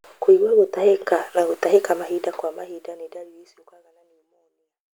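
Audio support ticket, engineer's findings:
Nothing stood out on listening to this speech, and the smooth fade out from around 2 s onward reads as an ordinary editor's fade.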